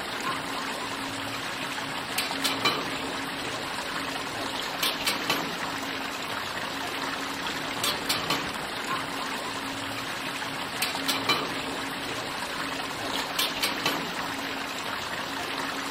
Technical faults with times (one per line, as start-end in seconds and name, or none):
none